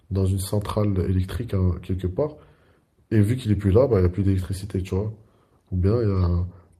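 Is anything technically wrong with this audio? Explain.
Yes. At 3.91 to 3.97 s the speech briefly turns rougher and grainier, a short patch of added noise with no silence or dropout. This is a lost packet rebuilt from error correction. About 40 ms of audio, which fits two lost 20 ms packets, never arrived. The packets that followed each carried a low-bitrate backup copy of the missing audio, and the decoder played those instead. Continuity survives, but detail is coarser until full-quality packets return.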